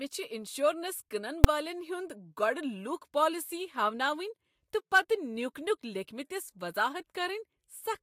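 It's a speech clip with one fault: invalid numbers at full scale at 1.44 s. A calculation blew up into infinite or invalid values, which got pinned to an extreme value for a tiny block of about 5.33 ms, which fits a 256-sample block. The waveform sits flat there, far beyond the level of the speech around it. Because the block is so short, you hear it as a single loud bang.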